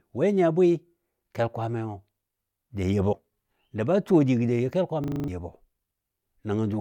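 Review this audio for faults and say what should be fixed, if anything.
Compressed frames skipped, 3.11 to 3.14 s: whole frames were dropped, either missing from the file or rejected by the decoder as damaged. The speech jumps ahead by about a tenth of a second, which fits roughly four frames of about 23.2 ms. Prevention: check file integrity and add error resilience or concealment so damaged frames are repaired or masked, not discarded.

System hang loop, 5.04 to 5.28 s: the computer or audio driver stalled while the sound hardware kept cycling its ring buffer. A 40 ms slice of speech repeats exactly six times at 25 Hz, producing a rapid machine-gun stutter, and about a fifth of a second of real audio is lost. Prevention: give the audio thread real-time priority and have the driver output silence when the buffer isn't refilled.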